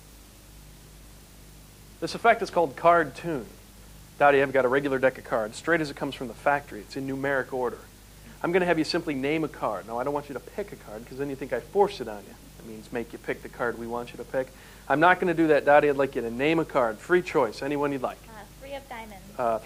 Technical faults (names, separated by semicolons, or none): none